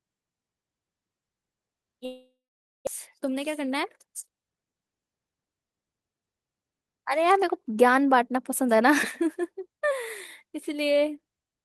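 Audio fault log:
2.05–2.89 s, long network dropout: the speech breaks off, and the last sound is stretched into a buzzy tail that fades within a few tenths of a second, leaving about half a second of silence before the audio resumes. When it returns, roughly 0.6 s of speech is simply gone, and the timing has shifted by about a fifth of a second. A stall of several hundred milliseconds in arriving packets is the likely cause. Unlike a brief packet-loss glitch, the concealment gives up and falls silent, and unlike a recording gap, the content after the break has skipped ahead.
3.19–5.55 s, jitter buffer speed-up: for just over two seconds the speech runs at about 108% of its normal rate, sounding slightly hurried while the pitch stays unchanged. The receiver is cutting out many short slices of one or a few pitch periods to drain excess buffered audio, about a fifth of a second in total. The steady pitch is what separates this from a resampling or clock-rate speed-up, which would also raise the voice's pitch.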